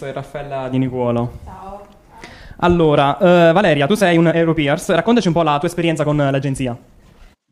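From 3.45 s to the end, a time-stretched section runs about 1.45 times faster with pitch unchanged, sounding rushed, likely from software dropping short pieces. A spectrogram shows tighter-packed events at the same frequencies, with small splice discontinuities in the waveform.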